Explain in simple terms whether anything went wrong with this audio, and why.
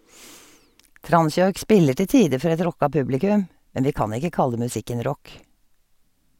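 Nothing went wrong with this audio; there are no faults to hear anywhere in it.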